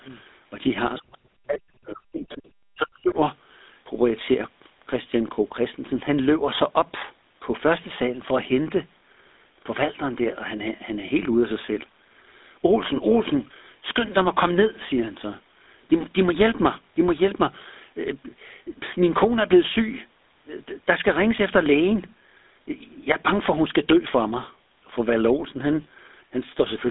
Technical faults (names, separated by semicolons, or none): GSM full-rate codec; speech suppressed in double talk; other side's voice leaking through